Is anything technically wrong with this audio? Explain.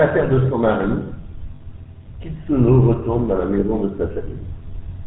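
Yes, there are two faults.

GSM full-rate codec, throughout: the speech passes through a vocal-tract model driven by sparse, regularly spaced pulses, with nothing above 4 kHz. This gives a plainly audible buzzy, gravelly roughness and muffled top end, consistent with 13 kbps GSM.

Lost GSM frames, at 1.56–1.61 s and 3.60–3.63 s: missing frames were filled by repeating the last good frame's settings. Each gap, about two 20 ms frames and then one, sounds like a brief rough, metallic ring.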